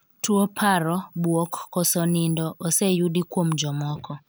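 No technical faults can be heard anywhere in this speech recording. There is nothing to point to at any moment in the audio.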